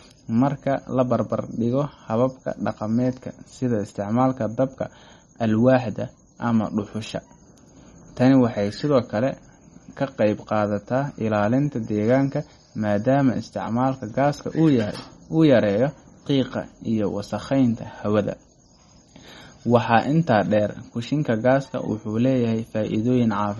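Throughout the speech, the treble stops dead at about 11.8 kHz. The s sounds swirl and chirp metallically, and quiet detail flickers in and out. This is likely MP3 compression at a low bitrate, starving weak frequency lines and zeroing them frame by frame.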